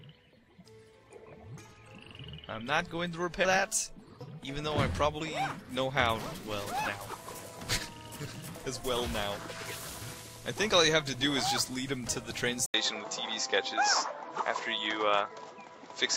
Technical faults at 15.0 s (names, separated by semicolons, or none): input switched to a poorer device